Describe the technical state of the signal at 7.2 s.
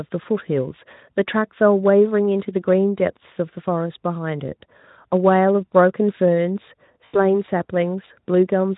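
At 7.2 s the audio sits inside a stretch of VoIP packet loss concealed by the speech codec, running from 7.05 to 7.24 s. About 80 ms of packets went missing, which fits four 20 ms frames. The Speex decoder filled the gap by extrapolating its last pitch and filter while lowering the gain, so the speech smears into a buzzy tone or coloured noise that fades. Because each frame builds on the last, the speech stays weak or distorted for tens of milliseconds or more after the 7.24 s recovery.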